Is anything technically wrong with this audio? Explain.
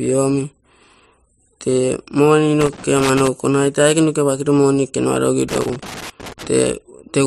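Yes. Two irregular bursts of crackle and scratching break up the speech, from 2.61 to 3.28 s and again from 5.49 to 6.47 s. This is loose connector crackle. A worn or dirty contact in the signal path is shifting, so the connection opens and closes many times in quick succession. Each break chops the signal and produces the erratic crackling heard across both stretches.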